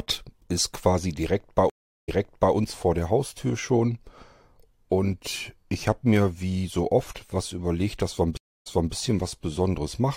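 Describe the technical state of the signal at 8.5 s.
At 8.5 s the connection has dropped and the player is mid-way through a stream reconnect, spanning 8.37 to 8.94 s. It goes silent for about 0.29 s, then a fresh decoder picks up speech roughly 0.28 s earlier than where it broke off, so a short stretch is heard twice.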